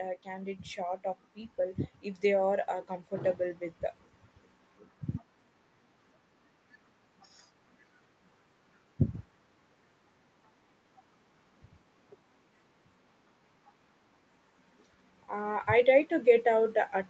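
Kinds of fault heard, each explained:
Automatic gain rising: the automatic gain control judged the incoming level too low and raised its gain in a slow ramp rather than a step, so the speech and the background noise swell together. Here the rise runs from 1.57 s to 3.68 s, about two seconds, and lifts the level by about 3 dB. The band stops at 8 kHz through the call microphone processing, so the swell is heard across that limited range.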